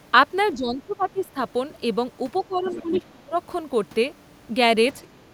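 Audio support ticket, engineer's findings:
Speech suppressed in double talk, 0.55–1.37 s: talker's level drops by roughly 15 dB, dipping in and out for about 0.7 s while the far end speaks. Likely the echo canceller's suppressor, unable to separate near-end speech from loudspeaker echo, attenuating both. Speech suppressed in double talk, 2.48–3.37 s: deeper cut, roughly 25 dB, again about 0.7 s affected in pieces. Same likely mechanism, with heavier suppression during overlapping talk.

Other side's voice leaking through, 1.18–1.22 s and 2.37–2.41 s: brief faint scraps of the far-end voice, roughly 30 dB below the talker. Likely residual loudspeaker echo the canceller failed to remove from the mic. Other side's voice leaking through, 2.64–3.02 s: longer, clearly audible stretch, only about 10 dB under the talker and overlapping the suppression. Likely the canceller losing track of the echo during double talk.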